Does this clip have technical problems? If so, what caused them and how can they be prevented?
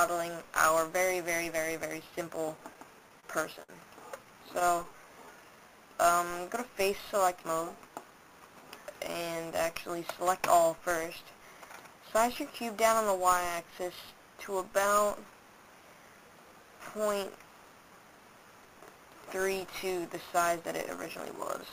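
Yes. Between 2.57 and 3.25 s, and again between 4.25 and 4.86 s, the sound drags and stutters. These are repeated stalls (stutter): packets arrived late, so the jitter buffer kept running dry and the receiver extended the last sound to fill four gaps totalling 56 ms (longest 29 ms), then five gaps totalling 48 ms (longest 11 ms). A more stable network path or a larger jitter buffer would prevent this.

From 3.63 to 3.71 s one sound is held slightly too long. This is a short stall from a late packet: the buffer emptied, the receiver stretched the existing audio by 54 ms, then resumed where it left off. Prioritising real-time traffic on the network would help avoid it.

Between 4.89 and 5.57 s the audio slows to about 89% speed without changing pitch. This jitter buffer slow-down added 84 ms by repeating tiny segments, rebuilding a depleted reserve. A steadier connection, so the buffer rarely runs low, would prevent it.

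From 7.75 to 8.79 s the audio runs hurried, at about 109% speed, still at the same pitch. In this jitter buffer speed-up the receiver trimmed roughly a tenth of a second of short pieces to shed excess delay. Smoother packet delivery would prevent it.

At 19.52 to 19.63 s there is a brief, irregular burst of crackle. This is loose connector crackle: a worn or dirty contact rapidly making and breaking, chopping the signal. Cleaning or replacing the connector and securing the cable would prevent it.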